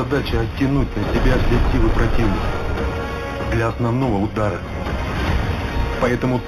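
Throughout, the audio shows imaging from linear upsampling: it was raised from 8 kHz to 48 kHz by straight-line interpolation. Content dulls toward 4 kHz, and a faint mirror image, roughly 25 dB down, fills 4 to 8 kHz as metallic shimmer, visible on a spectrogram as a reflected band.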